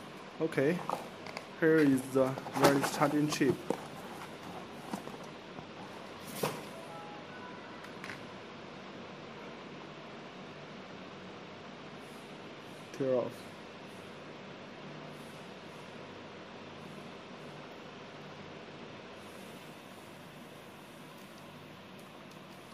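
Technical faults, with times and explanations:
No technical faults are present, so there are no times or explanations to give.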